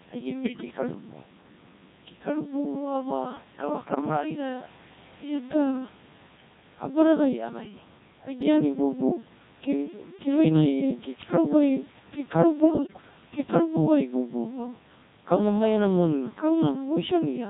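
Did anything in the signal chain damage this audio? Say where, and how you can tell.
Yes. At the codec stage, the whole clip is robotic and buzzy, consistent with the Codec 2 vocoder's 1.6 kbit/s mode: the decoder rebuilds the speech from sine waves using only pitch, voicing, energy and envelope.

At the network or radio link, bit errors on digital voice radio hit at 0.44–0.94 s, 3.84–4.01 s and 12.60–13.01 s. Corrupted frame parameters there produce pitch jumps, warbles and bleeps.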